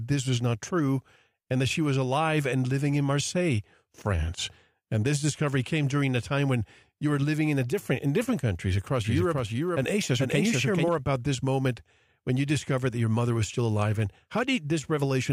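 A doubled audio track runs from 9.05 to 10.89 s in this speech recording: a second full-band copy of the speech trails the original by around 0.4 s, roughly 5 dB quieter. The copy carries no decay or room colouring, and it appears and vanishes abruptly at those two points rather than fading. The likely cause is the same signal being captured again through a slower path, or an edit leaving two out-of-step copies mixed together.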